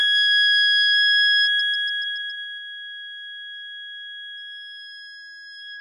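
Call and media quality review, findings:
Throughout: treble in the music sounds gritty and metallic, with a synthetic sheen and nothing above 10.5 kHz. Likely HE-AAC compression, where spectral band replication copies lower bands upward, so harmonics misalign; the heavy damage fits a bitrate around 16 kbps.

1.39–2.65 s: zipper noise, a fast ticking that rides on the music as the level drops about 20 dB. The gain stage moves in unsmoothed 2 dB steps, roughly seven per second, and each jump clicks.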